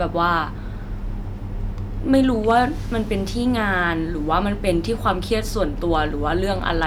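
A stage in the chain was driven past the largest level it can pass, so the speech peaks were sliced flat. The result is hard clipping, and those flattened tops throw harmonics high into the spectrum. From 2.14 to 2.59 s, with an overload of about 3 dB, the louder syllables gain a gritty crackle. A brief tick of the same distortion lands at 5.95 s, about 1 dB over. From 6.68 to 6.83 s the crackle returns at about 3 dB.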